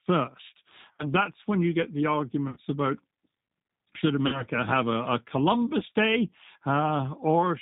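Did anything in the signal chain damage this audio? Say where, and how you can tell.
Yes. At the codec stage, the whole clip went through a low-bitrate speech codec that rebuilds the voice from a vocal-tract filter and a few pulses per frame. The result is plainly rough, synthetic speech with nothing above 4 kHz, which fits 8 kbit/s G.729.

On the network, VoIP packet loss was concealed by the speech codec at 0.91–1.07 s (just before "that's when you get"), 2.48–2.57 s (right after "when you get the"), 4.27–4.43 s and 5.79–5.83 s. The decoder stretched its last pitch and filter into a fading buzzy tone or coloured noise, and the voice stays weak briefly after packets return.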